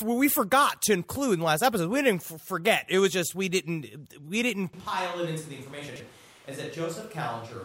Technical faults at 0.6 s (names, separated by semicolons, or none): none